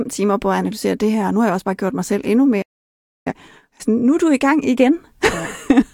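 At 2.62 s, just after "gjort mig selv endnu", the speech snaps to silence through a very quick fade of about 8 ms and stays dead until 3.32 s, resuming mid-flow at "altså nu er du". This is a digital broadcast dropout: the receiver stopped getting decodable frames and muted its output, so roughly 640 ms of the programme, which points to a run of lost or corrupted frames, never arrives and cannot be recovered.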